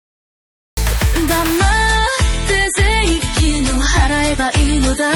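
A cut-off start runs from 0.00 to 0.77 s. The opening is digital silence, and at 0.77 s the sound appears abruptly partway through, with no attack or fade-in leading up to it. The recording or stream began late, so whatever was sounding before that point was never captured, and the audio is simply switched on in the middle of an event rather than beginning naturally.

An adaptive stream at a lower bitrate takes over at 1.58 s and lasts to the end of the clip. The quality steps down suddenly with no gap. Nothing remains above about 11.5 kHz, so the treble goes dull, and coding artefacts become more noticeable. This points to the player switching from roughly 128 kbit/s MP3 to roughly 32 kbit/s MP3 when the connection slowed.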